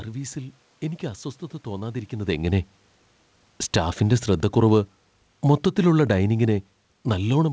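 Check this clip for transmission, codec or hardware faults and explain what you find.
One fault stands out: automatic gain falling, from 3.61 s to the end of the clip. The level change near 2.0 s is different; it sounds like the talker shifting position relative to the microphone. The spectrum also stops sharply at 8 kHz, consistent with a wideband call path such as G.722 at 64 kbps.

From 3.61 s onward, the gain control has judged the input too loud, or its background noise too strong, and is steadily pulling its gain down. The speech sinks gradually, and the room noise fades along with it at the same rate. That shared decline is what separates this from a talker moving away, where the background would stay put. On a waveform, the envelope tapers smoothly toward the end. On a spectrogram, every band dims together, noise floor included.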